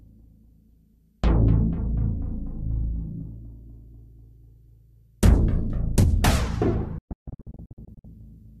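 At 6.98 s a digital broadcast dropout begins and lasts until 8.05 s. The receiver stopped getting clean frames and muted each bad one. The sound breaks into a series of short holes rather than one gap. About 0.62 s is lost across roughly 1.06 s, which suggests a couple of dozen failed frames. The longest single silence is 144 ms. Each mute fades in 3 ms, so the cuts are abrupt. What was broadcast during the holes is gone.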